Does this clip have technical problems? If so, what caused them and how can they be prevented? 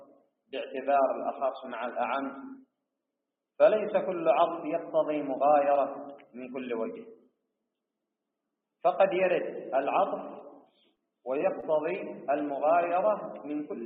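Yes. Sound cut by the noise suppressor appears at 0.00 to 0.27 s, 6.17 to 6.35 s and 7.03 to 7.29 s. The suppressor judged steady parts to be noise and pulled them down by about 12 to 13 dB. Unlike a dropout, the sound thins and sinks rather than going silent, and sharper onsets survive. Gentler suppression settings, or a cleaner input that needs less suppression, would prevent it.

Short concealed packet loss occurs at 10.95 to 10.99 s and 11.61 to 11.64 s. About 20 ms of audio arrived too late each time, and the receiver covered it by extending the preceding sound before blending back. Unlike a click or digital glitch, it is a brief smear that continues the surrounding sound. A more stable network path or a larger jitter buffer would prevent it.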